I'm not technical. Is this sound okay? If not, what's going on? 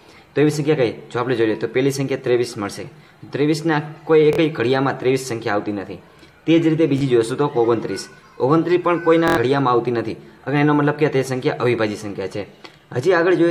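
No. There are three short Bluetooth stutters, at 4.33 to 4.38 s, 6.98 to 7.01 s, and 9.28 to 9.37 s. Each time, the wireless link briefly failed to deliver sound, so the receiver kept replaying its last tiny slice until fresh data arrived. That causes a quick buzzy repeat of about 46, 23 and 93 ms, with the longest one sounding like a brief machine-gun flutter. Afterwards the sound jumps ahead, skipping the missing portion.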